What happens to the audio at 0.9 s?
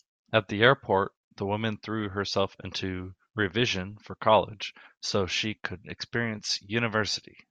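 Nothing goes wrong at 0.9 s; the speech plays through that moment intact, with no dropout, click or distortion.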